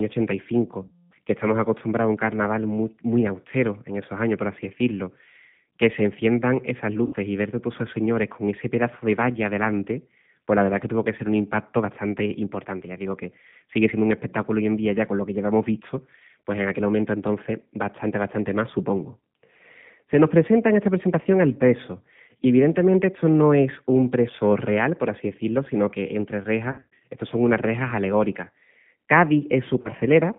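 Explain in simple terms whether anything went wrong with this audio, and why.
G.729 codec, throughout all 30 seconds: the speech was squeezed into a low-data phone format that rebuilds the voice from a simple model. Everything above about 3.6 kHz and below about 150 Hz is gone, so the speech sounds thin, rough and noticeably synthetic.

VoIP packet loss concealed by the speech codec, at 0.87 to 1.14 s, 7.05 to 7.16 s, 26.72 to 27.0 s, and 29.81 to 29.91 s: chunks of audio never arrived. The decoder filled each gap by stretching the last bit of sound into a fading buzz or noise, and the speech stays weak briefly afterward.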